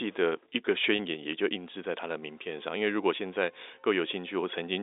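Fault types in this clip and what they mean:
Packet loss with pitch repetition: around 0.96 s a 30 ms gap, likely a single lost packet, is filled by repeating the last pitch period, giving a brief held, buzzy sound.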